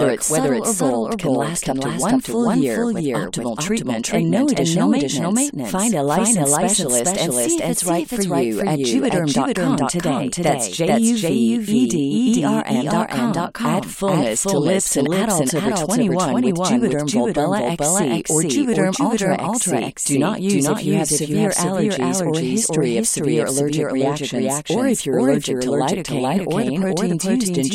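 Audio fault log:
Throughout, doubled audio track: a second copy of the speech trails about 400 ms behind at roughly equal level, with no room tail, likely a slower duplicate capture path.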